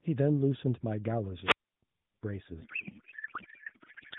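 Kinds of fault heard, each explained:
wireless microphone squelch dropout: The radio signal fades until the receiver mutes. Hiss rises at 1.43 s, then 0.31 s of near silence until 1.83 s.
codec payload misread: The decoder unpacks the bits in the wrong layout. From 2.62 s on, garbled warble replaces speech, fitting octet-aligned AMR read as bandwidth-efficient.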